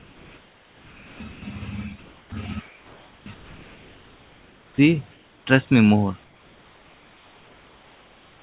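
Comfort noise in place of the background runs from 0.0 to 1.2 s. The real room tone is replaced by a steady, featureless hiss about 3 dB quieter, likely because the sender's voice detector stopped transmission and the receiver filled the pause with synthetic noise.

Sound dropped by the voice detector follows at 1.32 to 1.42 s. About 90 ms of sound vanishes into that same smooth noise, likely because the detector mistook it for background before triggering again.

The comfort noise returns at 2.0 to 2.32 s at an unchanged level, then at 2.66 to 3.26 s and 3.34 to 4.78 s, about 2 to 3 dB down. It comes back at 5.12 to 5.46 s, just before "trust me more", and from 6.24 s, after "trust me more", to the end. Each time, the flat noise stands in for the textured background.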